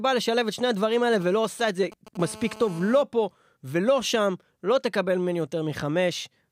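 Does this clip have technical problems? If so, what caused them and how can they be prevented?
Yes. From 1.13 to 2.17 s, a galloping dit-dit-dit of brief 217 Hz buzzes sits well below the speech. These are GSM signalling bursts: a nearby 2G phone sending short groups of radio pulses, which the audio circuitry rectifies into audible clicks and buzz. Keeping phones away from the microphone, cables and preamp, or switched to flight mode, prevents this.

From 2.20 to 3.03 s, a hard, raspy buzz at 217 Hz, rich in harmonics, runs steadily about 19 dB below the speech. This is GSM phone buzz: a nearby 2G phone in a call, transmitting bursts 217 times a second that the circuitry demodulates into a continuous tone. Shielded, balanced cabling and RF-filtered inputs, along with distance from phones, prevent it.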